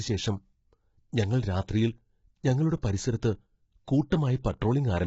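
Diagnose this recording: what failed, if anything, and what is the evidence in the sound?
Across the whole clip the speech sounds rough and grainy, with heavy codec damage: noise fills the gaps between the voice's harmonics, and nothing is present above 7.7 kHz. This points to the codec stage, likely low-delay AAC compression of the AAC-ELD kind used in video calls. At a rate that fits around 16 kbps, the frame's frequency lines are quantised too coarsely, leaving grain between the harmonics, and the band above 7.7 kHz is dropped outright.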